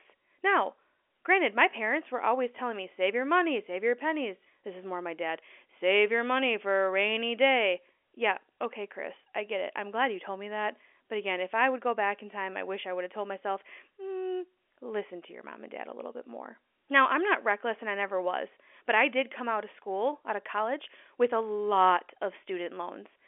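No technical faults can be heard anywhere in this speech, so there is nothing to describe in time order.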